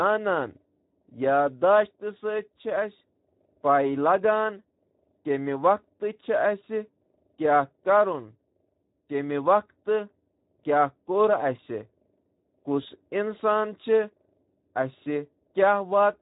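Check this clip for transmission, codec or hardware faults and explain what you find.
One codec fault runs through the whole speech clip: Speex codec damage, plainly audible from start to end. Speex is a CELP speech codec that models the voice with a filter and an excitation signal. At a modest setting it has few bits for that excitation. The sound fits a rate near 11 kbps. The coarse excitation leaves the speech noisy and hoarse, with a rough, grainy texture laid over every phrase.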